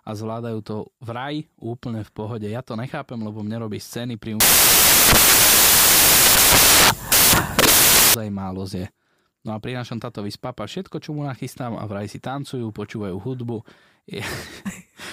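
A speech recording with one fault. From 4.40 s to 8.14 s, right after "mne robí scény pri", the samples are built from the wrong bytes. Byte order or alignment is off, so the noisy low bits dominate. The result is loud, harsh broadband noise, close to white on the louder sounds.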